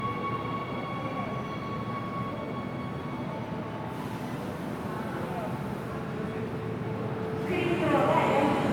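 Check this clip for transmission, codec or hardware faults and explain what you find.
One codec fault runs through the whole clip. Generation loss: swirly, hollow texture and blurred attacks throughout, likely from about four MP3 passes, each re-quantising on a shifted frame grid. Content reaches 20.1 kHz, and the encoding was 128 kbit/s.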